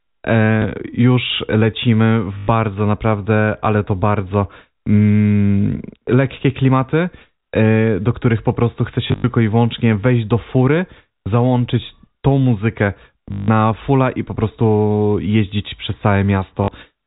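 A small blip breaks the speech at 0.62 to 0.64 s, and short robotic stutters at 2.38 to 2.48 s, 9.08 to 9.24 s, 13.32 to 13.48 s and 16.64 to 16.68 s. Longer ones buzz near 50 Hz. This is packet loss with the last packet repeated: the receiver replayed the final 20 ms chunk until new audio arrived. At 9.08 s the gaps are scattered, up to 80 ms. The G.711 telephone band stays capped at 4 kHz throughout.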